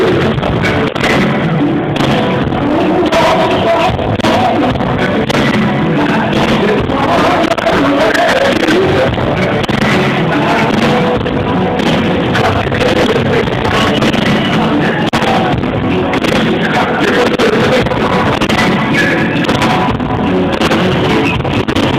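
No technical faults can be heard anywhere in the recording.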